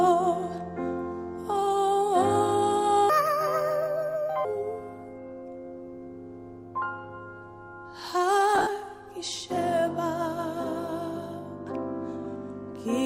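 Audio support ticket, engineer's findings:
Section at the wrong speed, 3.10–4.45 s: likely a clock or resampling mismatch in playback. Audio runs 1.48x fast, pitch up about seven semitones, hurried and thin.

Lost LE Audio frames, 8.55–8.67 s: LC3 concealment over roughly 90 ms of gaps within 120 ms, longest run about 50 ms. Tones smear into noise, then fade.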